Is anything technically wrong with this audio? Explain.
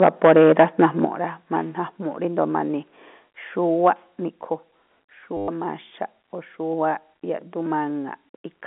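Yes, there are three kinds of fault.

Microphone overload: the input volume was likely set too high, driving peaks about 6 dB past the converter's ceiling from 0.02 to 1.05 s, flattening a few percent of samples. Again at 3.86 to 3.88 s, about 2 dB over. The loudest moments gain a harsh, crackly edge.

Microphone volume stepped down: the call software, likely reacting to that overload, cut the device's input gain in single jumps: about 4 dB at 0.04 s, about 9 dB at 1.05 s, and about 4 dB at 4.29 s. Each time the sound and its background suddenly drop in level.

Packet loss with last packet repeated: from 5.37 to 5.48 s, 110 ms of audio never arrived, and the receiver kept replaying the last packet it had. The repetition spacing fits 10 ms packets, so the stretch buzzes around 100 Hz, a brief robotic stutter within the telephone-band sound.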